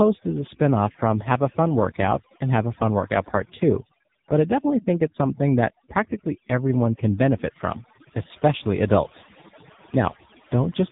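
Throughout the clip, overdone noise removal is at work. The background drops away, broken by twinkling specks. Frequency bands near the noise estimate were cut far down. Quiet parts of the speech went with them.

The whole clip also carries the AMR narrowband mobile codec. Nothing above 3.8 kHz survives. The codec damage is heavy. The speech sounds buzzy and synthetic, which fits a low bitrate around 6.7 kbps. Too few pulses per frame rebuild the sound.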